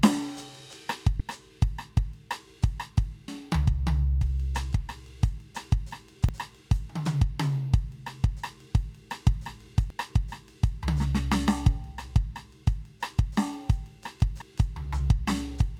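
A music clip with damaged data in a compressed stream. Brief glitches break through at 1.17 to 1.21 s, then at 3.28, 6.29, 9.90 and 14.42 s. Corrupted bytes make the decoder misread frames. It loses sync and hunts for the next valid frame header.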